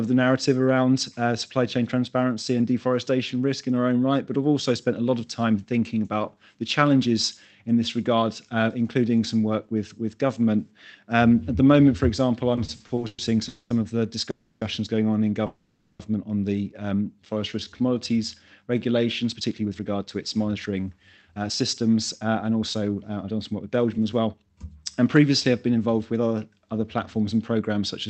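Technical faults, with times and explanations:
12.55–13.20 s, repeated stalls (stutter): the sound catches seven times in quick succession as packets trickle in late and the jitter buffer keeps running dry. Each gap is bridged by stretching the last sound, the longest about 110 ms, for about 250 ms in all. That is roughly 38% of the passage. Unlike a single freeze, it is a rapid series of short hitches.
13.48–13.72 s, 14.30–14.63 s and 15.46–16.01 s, call audio freeze: the sound stops moving forward and the last moment hangs as a fading buzz, for 220, 310 and 530 ms respectively. The first and third fade into about 40 ms of silence. Playback then resumes where it left off, with nothing lost but the timing pushed later. The likely cause is packets held up long enough to empty the jitter buffer. Each of these is one long hold rather than a cluster of brief catches.
17.20–17.95 s, jitter buffer slow-down: the audio drags to about 84% speed while the pitch stays put. 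The receiver repeats single pitch periods to rebuild its reserve, adding about 130 ms. It sounds drawn out rather than frozen, with no held buzz or silence.
19.34–24.65 s, jitter buffer speed-up: over about five seconds the audio runs at about 113% speed at unchanged pitch, sounding hurried. The receiver trims tiny pitch-period slices to shed excess buffered delay, roughly 0.7 s in total. This is the mirror of the slow-down: it is compressed rather than stretched.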